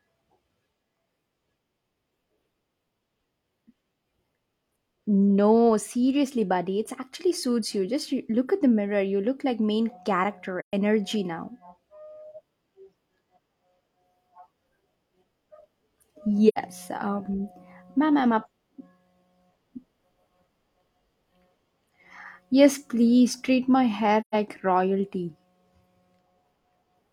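At 10.59 to 10.73 s, 16.48 to 16.58 s, and 24.20 to 24.35 s, just after "please treat my hair", the speech drops into silence from AAC frame loss with muting. The decoder zeroed the missing spectra, and the overlapping transform windows taper the sound out and back in. The result is soft-edged holes. The gaps of about 128 ms fit three lost frames, and the 85 ms gap fits two.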